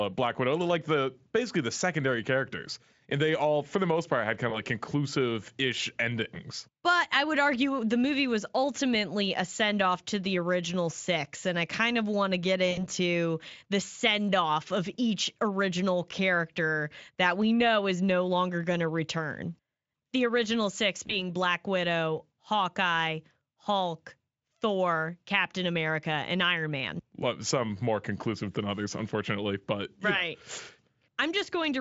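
At 4.49 to 4.58 s, 12.71 to 12.84 s and 21.07 to 21.22 s the speech briefly smears into a buzzy tone or coloured noise that fades, before recovering weakly. This is VoIP packet loss concealed by the speech codec. The Speex decoder filled each gap by extending its last pitch and filter at dropping gain, and the effect lingers because later frames build on that guess. The first and third gaps fit one lost 20 ms frame, and the middle one about 60 ms.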